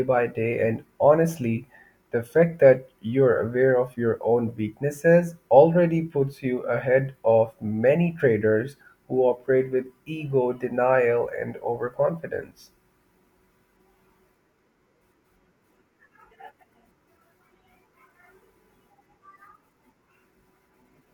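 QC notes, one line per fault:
No faults heard anywhere in the speech.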